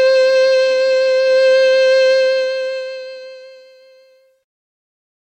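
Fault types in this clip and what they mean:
Truncation distortion on a fade: the music's fade-out from about 2 s keeps too few bits without dither, fitting an 11-bit word. From 3.75 s to 5.31 s it turns gritty. The waveform shows square steps, and the spectrogram shows broadband grit.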